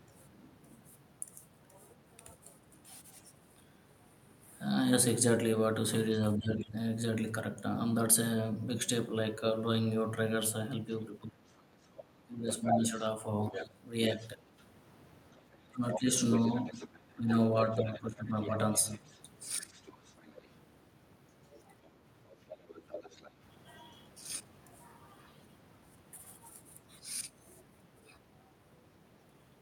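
In this speech recording, the talker's level dips by roughly 10 to 15 dB at 6.38 to 6.77 s, 11.19 to 14.42 s, 15.68 to 16.1 s and 17.16 to 19.74 s. This is speech suppressed in double talk, likely an echo canceller unable to tell the talker from loudspeaker echo and attenuating both. A second, fainter voice is also heard, roughly 10 to 20 dB below the talker, at 6.6 to 6.67 s, 11.0 to 20.48 s and 21.84 to 23.3 s. That is the other side's voice leaking through, likely residual loudspeaker echo the canceller failed to remove from the microphone.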